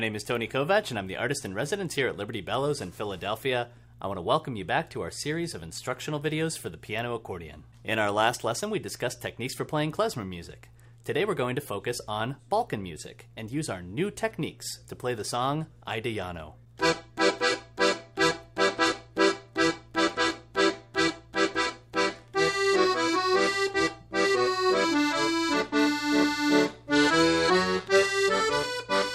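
A steady buzz at 100 Hz runs through the whole audio, following the signal and vanishing in silence. It comes from a resampler restarted on every block. The 44.1 kHz to 48 kHz conversion was run separately on 10 ms blocks, so each block edge carries a small error. On a spectrogram this shows as thin vertical striations every 10 ms and faint harmonic lines at multiples of 100 Hz. Zooming into the waveform reveals tiny glitches at each block boundary.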